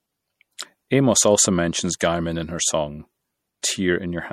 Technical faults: MP3 compression

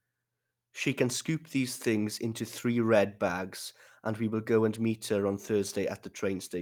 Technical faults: none

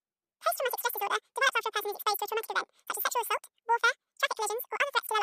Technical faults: wrong sample rate

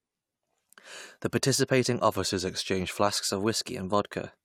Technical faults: drift correction step

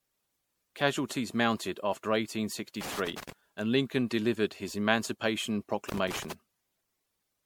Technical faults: generation loss; loose connector crackle

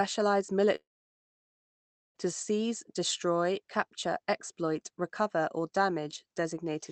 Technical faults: long network dropout

